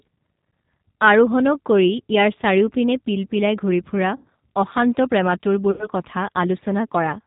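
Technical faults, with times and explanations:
Throughout, G.729 codec: the speech is squeezed to 8 kbit/s and rebuilt from a filter and a few pulses, so nothing clears 4 kHz and it sounds plainly rough.
4.17–4.25 s and 5.71–5.88 s, VoIP packet loss concealed by the speech codec: about 80 ms lost each time, fitting four packets, stretched into a fading buzzy tone or coloured noise with weak recovery afterwards.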